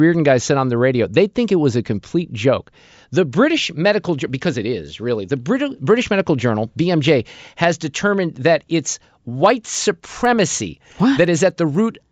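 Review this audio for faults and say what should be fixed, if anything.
Resampler restarted on every block, from 9.5 s to the end: regular ticks sound four times a second under the speech. Each 250 ms block was converted alone, likely from 16 kHz to 48 kHz, so every block edge lacked its true neighbouring samples. Carry the resampler's filter state across blocks.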